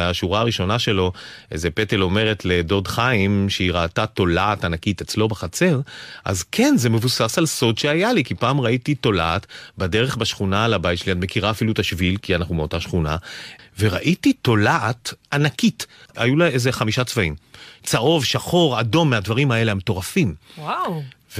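No technical faults can be heard anywhere in the speech recording, with the signal holding steady and continuous throughout.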